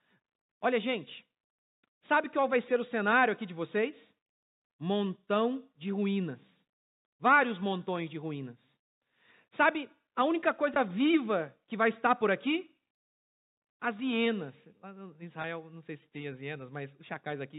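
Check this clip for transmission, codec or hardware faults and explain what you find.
Two brief transmission faults, both packet loss with pitch repetition, sit in this speech, which travels over G.711 telephone coding with its 4 kHz ceiling and faint level-following noise. At 10.74 to 10.76 s, between "a única" and "viva que vai estar", and at 15.42 to 15.44 s, just before "não sei se tem", 20 ms of audio went missing, consistent with two 10 ms packets. The receiver filled each gap by repeating the last pitch period, heard as a momentary held, buzzy tone.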